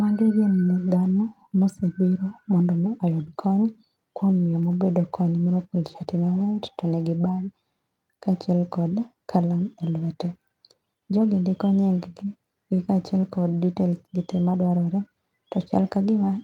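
No technical faults can be heard anywhere in the speech recording, and the signal holds steady throughout.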